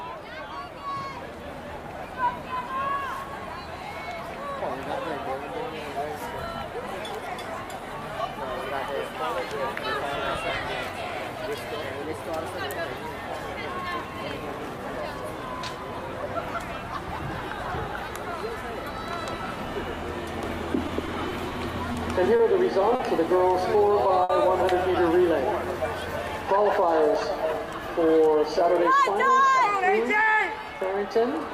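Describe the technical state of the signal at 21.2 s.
The sound drags and stutters through four brief holds between 20.87 and 21.52 s: repeated stalls (stutter), where a starved jitter buffer stretched the last sound until packets arrived, with nothing lost.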